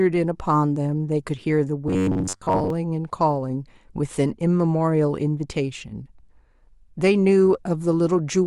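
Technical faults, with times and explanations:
1.88–2.70 s, robotic sound from repeated short buffers: the speech hardens into a rigid metallic buzz fixed at 93.8 Hz, likely because audio arrived too seldom and the last 10.7 ms or so was replayed to fill gaps, so most of this stretch is repeats.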